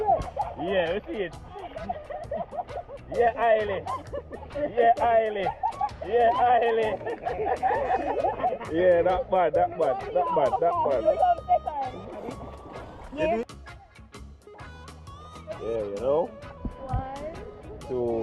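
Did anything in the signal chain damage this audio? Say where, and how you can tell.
No, nothing in the signal chain stood out as damaging on listening, and the call path it came through sounds as expected for that kind of link.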